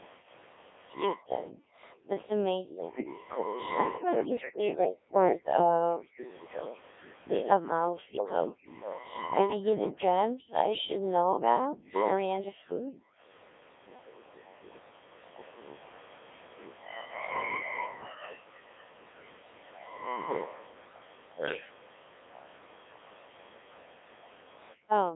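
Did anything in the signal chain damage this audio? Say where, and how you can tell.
Yes. The Codec 2 vocoder at the codec stage damages the whole clip. The speech sounds robotic and buzzy from start to finish, which fits a very low rate of about 1.3 kbit/s. The decoder rebuilds each frame from sine waves driven by pitch, voicing, energy and a coarse envelope, so the original waveform is gone and damage is heavy. A spectrogram shows smeared, synthetic harmonic stacks confined to 300 Hz to 3.6 kHz. The waveform looks like regular resynthesised pulses rather than natural detail.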